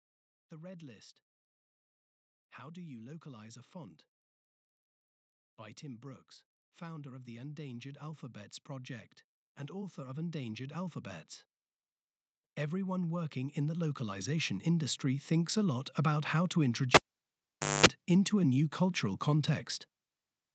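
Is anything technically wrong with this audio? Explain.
Yes. Automatic gain rising occurs from 5.43 to 11.32 s, about 10 dB, and from 12.58 to 15.65 s, about 8 dB, just before "lot about how to". The gain control judged the input too quiet and raised it slowly, so voice and background swell together. On a waveform the envelope ramps upward, and a spectrogram brightens across all bands.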